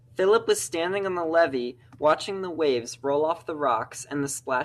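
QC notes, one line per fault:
No faults found on listening.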